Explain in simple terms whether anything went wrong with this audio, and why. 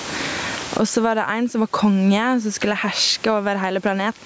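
Gain pumping runs through the whole clip. Loud and soft parts end up closer in level and the sound is squashed, likely from gain set far too high.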